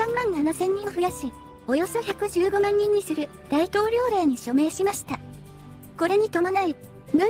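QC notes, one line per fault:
No fault to note in this clip.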